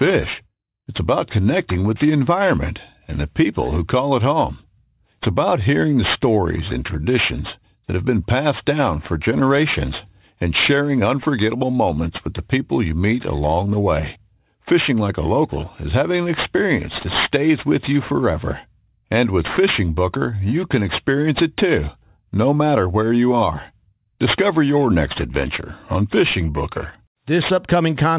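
Aliasing runs through the whole clip. Content above 4 kHz folded back unfiltered, fitting an 8 kHz resampling. Sibilants sound gritty and metallic, with false tones about 15 dB below the signal.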